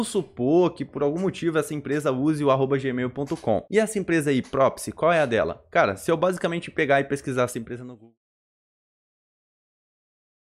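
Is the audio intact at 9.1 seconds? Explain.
Yes, the audio is intact at 9.1 seconds, after the smooth fade-out that finishes at 8.19 s, with no click or hard edge.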